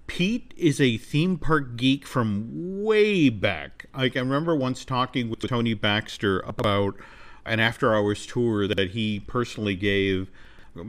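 At 5.34 to 5.48 s and again at 6.50 to 6.64 s, the speech briefly jumbles: chunks out of order, each time with a block of about 46 ms (which fits a 2048-sample buffer at 44.1 kHz) played two blocks late. Nothing drops out, but the sequence is scrambled, with three hard joins. The same fault recurs at 8.68 to 8.78 s, one block late, and at 10.45 to 10.64 s, three blocks late.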